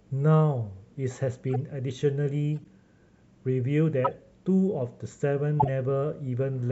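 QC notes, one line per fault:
1.54–1.56 s, 2.62–2.66 s, 4.04–4.1 s and 5.57–5.69 s: corrupt frame decoded. Damaged compressed frames got played anyway, so each spot throws brief chirpy, squeaky bursts into the speech, peaking around -20, -45, -15 and -10 dBFS. The one at 2.62 s is faint, and the one at 5.57 s is the loudest.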